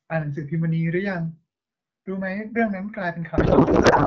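From 3.37 s to the end, a codec payload misread: octet-aligned AMR-WB frames are unpacked as bandwidth-efficient, shifting every field, so the speech becomes garbled noise and warble.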